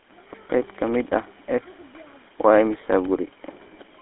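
It's a speech recording, and the whole thing has been squeezed through the GSM full-rate codec. Everything's confined to a phone-line band of roughly 250 Hz to 3.5 kHz, with nothing at all above 3.8 kHz, and the codec damage is plainly audible: that buzzy, gravelly texture you get when the vocal tract is modelled and driven by a sparse pulse train instead of the real excitation. It's consistent with the old 13 kbps full-rate coder. On top of that there are periodic USB or driver dropouts running from about 0.11 s to 3.95 s, one every 64 ms, so around seventy of them at roughly fifteen a second. Each one is tiny, a fraction of a millisecond replaced by silence, so you hear a steady ticking riding on the voice wherever there's signal. That's the classic sign of something stalling the USB bus or the audio driver on a fixed schedule.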